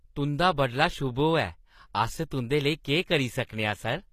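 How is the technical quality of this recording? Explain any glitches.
The recording carries audible codec damage throughout. HE-AAC compression is the likely cause: the treble stops near 14.9 kHz, and above a lower crossover it is rebuilt by copying lower bands upward, consistent with a low bitrate around 24 kbps. The rebuilt harmonics misalign, so sibilants sound gritty and metallic across the whole clip.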